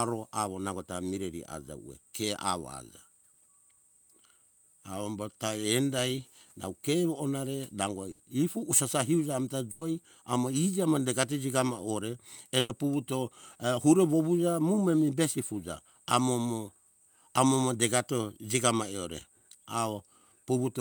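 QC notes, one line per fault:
8.11–8.21 s, 9.71–9.83 s and 12.59–12.71 s, burst of packet loss: the speech stalls into a brief held, fading buzz or hiss, then jumps ahead. A run of packets never arrived in time, so the receiver stretched and faded the last sound for 80, 100 and 100 ms, dropping that stretch.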